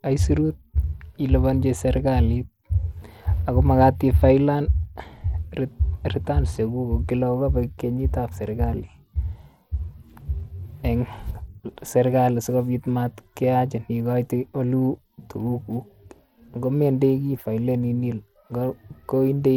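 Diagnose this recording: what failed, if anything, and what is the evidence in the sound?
The codec stage failed: throughout, the speech carries gritty noise, and the treble flickers rather than rolling off smoothly as a plain low-pass filter would. That fits likely Bluetooth SBC compression near 96 kbps, starving the top sub-bands of bits and coarsely quantising the rest.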